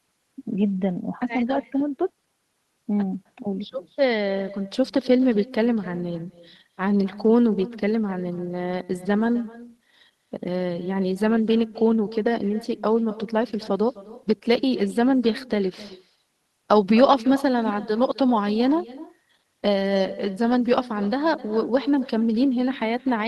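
From start to finish, the speech carries an echo with no canceller. The far end is playing the call through a loudspeaker, its microphone picks that playback up, and nothing subtracts it before it is sent back. Every phrase returns roughly 300 ms later, about 19 dB below the direct sound, as a faint, thinner duplicate trailing each syllable. It is low enough to sit behind the speech.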